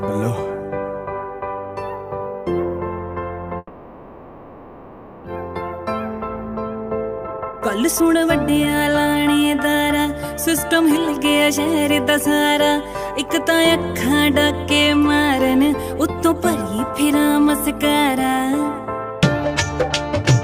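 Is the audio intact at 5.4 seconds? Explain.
No. A jitter buffer speed-up from 5.36 to 5.80 s trimmed about 50 ms in pitch-period slices to clear a backlog, so the sound runs 10% faster at unchanged pitch and feels hurried.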